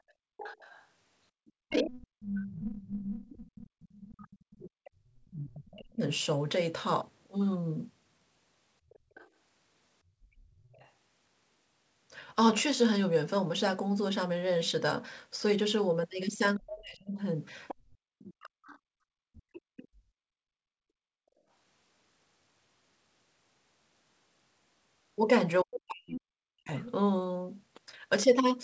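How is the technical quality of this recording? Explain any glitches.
The recording has repeated echo-control problems typical of a speakerphone call. The top end stops at 8 kHz, which fits a G.722 call path.

Other side's voice leaking through, at 0.09–3.19 s (about 10 dB below the talker), 8.89–10.9 s (about 30 dB below) and 17.68–19.88 s (about 20 dB below): a second voice appears underneath, likely loudspeaker sound the echo canceller failed to remove. Unlike suppression, this adds sound rather than taking it away.

Speech suppressed in double talk, at 1.57–6.04 s, 16.58–18.57 s and 25.63 s to the end: the talker's voice dips by roughly 40 dB, likely because the canceller turned everything down while both sides spoke. Here the talker is lost, not just the room.

Background gated by the echo canceller, at 9.01–10.57 s (about 19 dB) and 18.85–21.48 s (about 35 dB): the room tone briefly falls away while the loudspeaker plays, then comes back.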